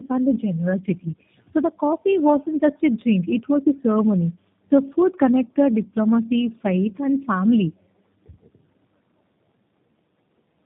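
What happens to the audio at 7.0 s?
At 7.0 s you're hearing tandem speech coding, and it runs through the whole clip. The sound points to two low-rate speech coders in a row, likely something like AMR-NB at around 10.2 kbit/s and then G.729A at 8 kbit/s, with a G.711 hop between them. The second coder has to rebuild speech the first already mangled, so it comes out rough, muffled and warbly, with nothing above about 3.8 kHz.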